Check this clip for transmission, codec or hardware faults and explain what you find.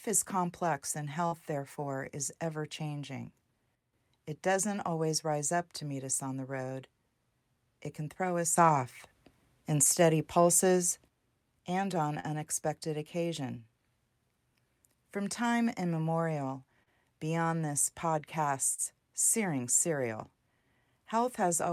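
Two kinds of fault are present: short concealed packet loss at four points, and two sudden gain jumps.

Short concealed packet loss occurs at 1.27, 12.20, 16.83 and 18.74 s. Each time about 40 ms of audio failed to arrive, and the decoder covered 30 to 42 ms by extending the preceding sound before rejoining the real signal. Each gap is heard as a brief smear or wobble. On a spectrogram, the filled stretch looks flat and slightly blurred across each gap, and the waveform loses its natural variation there.

The sudden gain jumps run from 3.75 to 3.93 s, where level drops by about 7 dB, and from 8.56 to 11.08 s, where it rises by about 7 dB. The likely cause is a gain setting applied without a ramp. The sound and the background noise step together, with an abrupt edge in the waveform envelope and a uniform brightness shift on the spectrogram.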